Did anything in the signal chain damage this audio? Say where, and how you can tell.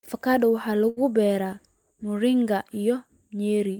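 Yes: a short stall from a late packet at 0.89–0.99 s. The jitter buffer ran dry, so one sound is stretched about 73 ms. Unlike a dropout, nothing is lost; playback resumes exactly where it paused.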